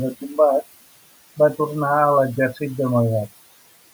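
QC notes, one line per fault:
Throughout, noise suppressor artifacts: background noise ducks by about 16 dB between phrases and swells under speech, as per-frame band gains track the room noise.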